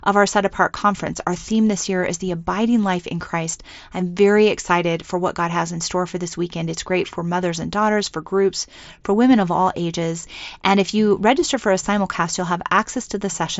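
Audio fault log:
No faults are present: the speech arrives over a Bluetooth mSBC headset link that is working as designed, with nothing above 7.7 kHz and only the light graininess that codec leaves on louder passages.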